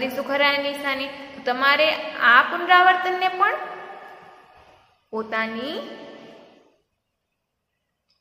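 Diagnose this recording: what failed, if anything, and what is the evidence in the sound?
Nothing in the signal chain has failed: the audio runs continuously, with no dropouts, discontinuities or added disturbances at any point.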